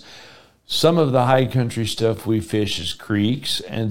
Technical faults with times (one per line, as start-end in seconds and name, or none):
1.00-3.91 time-stretched section